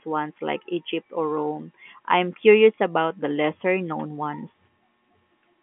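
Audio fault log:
No fault to log in this speech clip, which is carried over an ordinary telephone line band.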